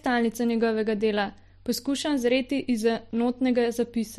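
Speech with clock slip clicks from 0.24 to 4.10 s. Regular ticks come about every 0.15 s, around 30 in all. Likely cause: two unsynced clocks drifting about 150 ppm apart.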